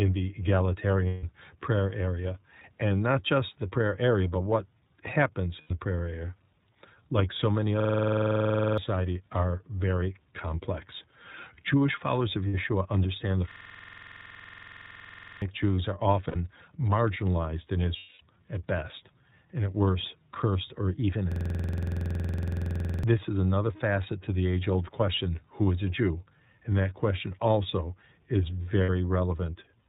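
The whole recording of speech carries the sound of the iLBC codec, a narrowband VoIP coder working here in 30 ms frames at about 13.3 kbps. Each frame's excitation is coded independently, which leaves the voice intelligible but audibly rough and synthetic. On a spectrogram, energy stops sharply at 4 kHz, with an empty band above. The waveform looks normal in shape but lacks fine high-frequency detail.

Lost iLBC frames first occur from 1.08 to 1.25 s, covering 150 ms. The decoder fills the gap by repeating the last pitch cycle mixed with noise, so the sound becomes a held, slightly buzzy vowel. On a spectrogram this appears as flat, smeared harmonics with no formant movement, fading in level. The same concealment recurs from 5.61 to 5.71 s (90 ms), between "area but what happens" and "prayer area".

A system hang loop runs from 7.80 to 8.78 s. Playback froze while the sound hardware kept cycling one 46.44 ms piece of audio, which fits a 2048-sample buffer. 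It repeats 21 times at 21.5 Hz, giving a rapid mechanical stutter and replacing about a second of audio. The waveform shows identical blocks tiled end to end, and the spectrogram shows vertical stripes at even spacing.

More lost frames follow from 12.47 to 12.55 s, lasting 60 ms.

The loop returns from 13.51 to 15.42 s with 41 repeats, losing about 2 s of audio.

Concealment occurs again from 16.29 to 16.36 s (60 ms) and from 17.97 to 18.22 s (240 ms). In the longer gap, between "marginalized in" and "at best and at", the buzzy fill audibly decays. After each gap, speech recovers almost immediately because the frames are independent.

A third loop, from 21.32 to 23.03 s, repeats 37 times and costs about 1.5 s of audio.

A final 60 ms loss occurs from 28.83 to 28.90 s, right after "that question also is".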